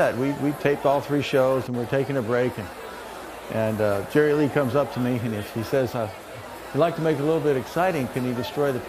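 No technical faults can be heard anywhere in the recording, and the signal holds steady and continuous throughout.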